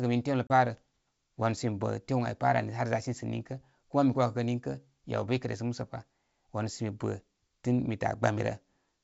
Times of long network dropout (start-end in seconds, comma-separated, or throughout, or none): none